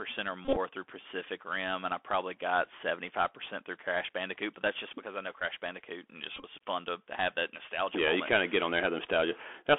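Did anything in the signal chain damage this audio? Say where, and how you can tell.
Yes. The codec stage, a Bluetooth CVSD headset codec, limits the sound to 300 Hz to 3.4 kHz throughout. Its one-bit adaptive steps leave clearly audible granular roughness.

Bluetooth headset packets were repeated at 0.45–0.57 s, at 5.40–5.42 s after "just because I know", and at 6.35–6.45 s before "fun to have that". Runs of about 20 ms buzz near 267 Hz.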